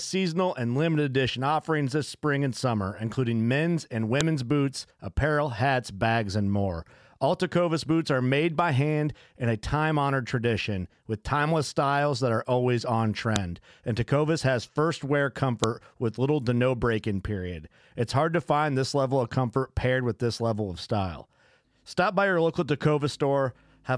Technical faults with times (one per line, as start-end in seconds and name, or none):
4.21 file header played as audio
13.36 file header played as audio
15.64 file header played as audio